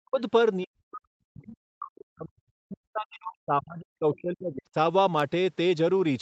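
Right at the start, 0.0 to 0.2 s, and then from 0.63 to 4.76 s, the speech gets pushed way down, something like 40 dB at its deepest. That's speech suppressed in double talk: most likely the echo canceller heard both ends talking at once and clamped down on everything, taking the talker's own voice with it.

Inside that long stretch there are two short scraps of the other side's voice leaking through, at 1.42 to 1.46 s and 4.14 to 4.19 s. The first is very faint, around 40 dB under the speech. The second is more noticeable, about 25 dB down. The likely cause is loudspeaker echo the canceller didn't fully remove. Both scraps ride on the call's usual band, which tops out near 8 kHz.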